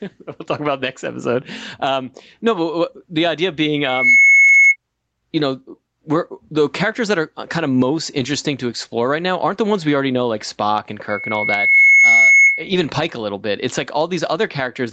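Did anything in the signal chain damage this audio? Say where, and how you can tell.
Yes. Gain pumping runs through the whole speech clip. The level swings by around 10 dB. Loud and quiet passages sit unnaturally close together, and the result sounds squashed. The likely cause is input gain set far too high, with a fast limiter or compressor pulling it down on each peak. The 8 kHz top end fits the call codec's band limit.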